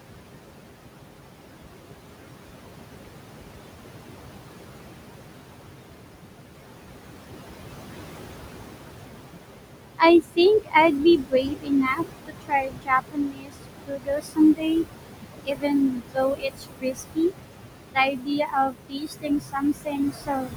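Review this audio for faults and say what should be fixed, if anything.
Noise suppressor artifacts are present throughout. The room noise sits only about 6 dB below the speech, and the suppressor pushes it down by about 21 dB between words. On a spectrogram the background floor blinks on and off between syllables. To prevent this, use gentler suppression or a quieter room, so the noise estimate doesn't swing hard each frame.

Speech cut by the noise suppressor occurs from 9.98 to 10.75 s, 11.18 to 14.72 s, 15.43 to 17.33 s and 17.94 to 20.56 s. In these spans the suppressor mistakes quiet speech for noise and drops it by about 20 to 22 dB, nearly five seconds in all. These drops show as sudden waveform dips and missing faint harmonics. To prevent this, lower the suppression depth and slow its attack, so soft speech isn't classified as steady noise.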